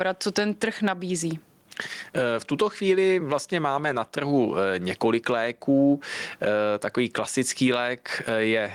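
Gain pumping runs through the whole speech clip, most likely because the input gain sits far too high for the microphone and a fast limiter or compressor keeps clamping it down on every loud syllable. The level swings by around 15 dB. Loud and quiet passages are pushed close together, giving a squashed, breathing quality throughout.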